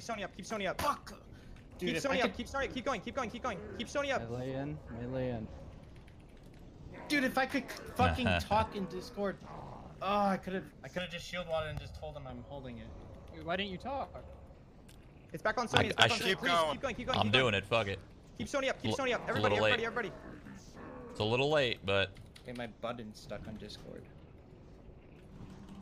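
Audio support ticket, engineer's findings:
Hollow, phasey, thinned-out sound, 10.98–12.29 s. Fixed notches, first near 300 Hz, repeating at even spacing upward. Channel delay (comb filtering): one channel late by roughly 1.5 ms, summed to mono, shared content cancelling at each notch. Probable component: stereo-to-mono downmix or per-channel buffer path, with one side lagging by a short fixed offset. Check channel alignment before the summing stage.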